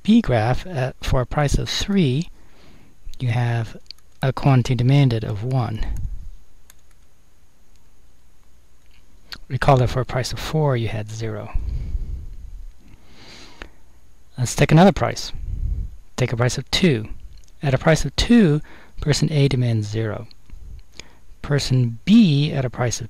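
Hard clipping runs through the whole recording. The signal is driven about 8 dB past what a stage can pass, so its loudest peaks are sliced flat. Only a small fraction of samples hit the ceiling, heard as crackle on peaks. The waveform shows squared-off tops, and the spectrogram shows brief vertical smears of high-frequency harmonics at those peaks.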